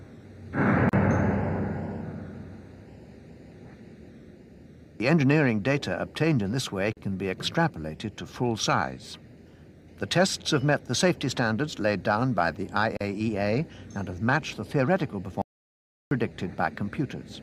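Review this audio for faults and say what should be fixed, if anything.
There's a gap at a join of encoded pieces at 0.89, 6.93 and 12.97 s, each about 37 to 38 ms of silence recurring every 6 s. The pieces were encoded separately and spliced untrimmed, so encoder start delay and last-frame padding sit in the middle of the sound. To prevent it, encode the whole thing in one pass, or trim the encoder delay and padding before joining.

At 15.42 s the sound cuts to silence, with no room tone, and picks up again at 16.11 s, so about 0.69 s is gone. That's an audio dropout to silence, likely from the input being lost, such as a dropped device or link or a stray mute, while silence kept being written. To prevent it, secure the input connection and watch the input meter while recording.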